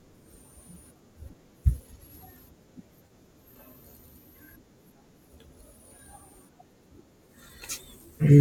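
At 3.06 s there's an AAC frame loss with concealment: roughly 43 ms, likely two frames, gets patched from the previous spectrum, leaving a brief smeared, noisy blip.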